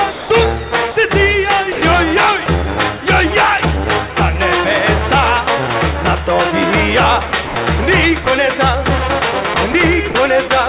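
A voice detector likely misreading sound as background stops sending at 0.12–0.30 s, 0.92–0.96 s, 1.72–1.82 s and 2.46 s. This is sound dropped by the voice detector, and each gap is filled with steady comfort noise. From 7.30 to 7.56 s the detector likely switches on and off repeatedly, so the sound is chopped. Another short drop to comfort noise follows at 8.24 s. The same chopping returns from 9.54 to 10.50 s, all heard through a band that stops at 4 kHz.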